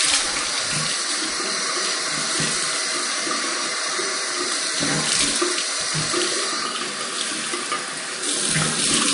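From start to finish the sound carries a watery, swirling quality, with plainly audible chirps and smeared attacks, the marks of MP3 compression at a low bitrate, likely around 40 kbps. Starved of bits, the encoder cut all treble above about 10.6 kHz and dropped weak frequency lines, which flicker in and out frame by frame. A spectrogram shows a hard, flat ceiling at 10.6 kHz with patchy, blocky holes beneath it.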